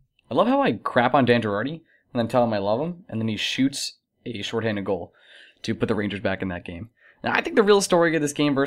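Listening closely to this short speech recording, nothing technically amiss stood out at any point.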